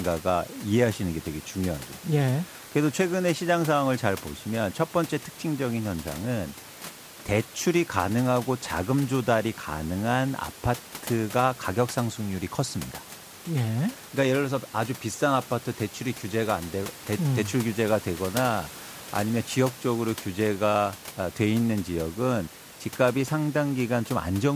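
Speech recording with no technical faults to report.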